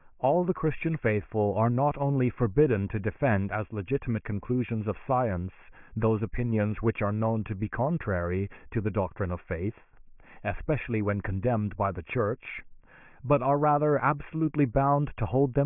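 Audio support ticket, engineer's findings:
Speech signal checked across the whole clip: no dropouts, clipping, level jumps, noise bursts or timing disturbances found, so no fault to report for this path.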